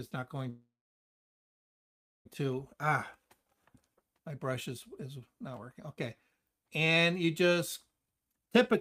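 From 0.49 to 2.27 s the sound stops and falls almost silent for about 1.6 s, then resumes where it left off: a call audio freeze, likely from packets stalling and the jitter buffer running dry. From 8.01 to 8.75 s the audio rushes at 143% speed with unchanged pitch, a jitter buffer speed-up trimming around a third of a second of backlog.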